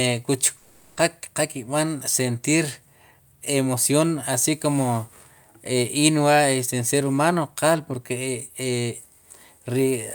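From 0.57 s to 0.99 s the speech turns into a buzzy smear of its last sound that fades out, and it resumes at 0.99 s with about 400 ms missing. This is likely a long network dropout, with the receiver filling the gap by extending earlier audio.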